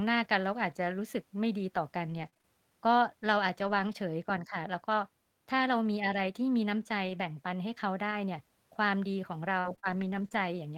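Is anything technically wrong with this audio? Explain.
Yes. The speech has scattered short gaps in two stretches, from 2.05 to 3.89 s and from 7.05 to 10.38 s. Packets were lost or arrived late. The receiver filled each hole by extending the sound just before it. About 80 ms is missing in the first stretch and 100 ms in the second, with no single gap much over 40 ms. It comes across as a few brief ticks, smears and hiccups in otherwise clear speech.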